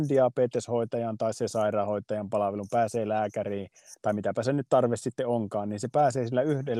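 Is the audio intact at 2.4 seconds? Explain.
Yes, at 2.4 seconds the speech runs intact, with no dropout, click, distortion or other fault to be heard at that moment.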